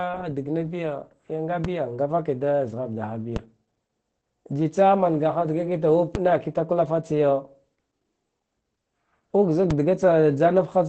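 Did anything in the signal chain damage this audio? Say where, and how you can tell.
Yes. The whole clip went through Opus voice compression at the codec stage: the speech is muffled and slightly hoarse and robotic, which fits SILK at a low bitrate near 12 kbps. On a spectrogram, energy stops sharply at about 8.6 kHz, a wideband limit, with coarse, smeared harmonics below it.

There are four DC steps, probably from the converter or input switching, at 1.65, 3.36, 6.15 and 9.71 s. Each is heard as a low thump while the speech carries on unchanged. On the waveform, the zero line jumps at each time and then slowly sags back, as a 2 Hz high-pass drains the offset.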